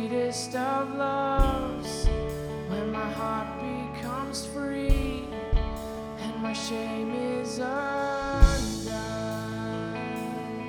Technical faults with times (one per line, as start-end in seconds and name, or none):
none